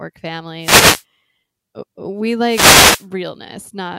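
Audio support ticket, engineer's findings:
Wireless microphone noise hit, 0.60–1.04 s and 2.44–3.07 s. Analogue FM radio link fading as reflected paths cancel at the receiver; receiver noise rises through the dropout. Heard as brief swishes of static over the speech, each under 1 s.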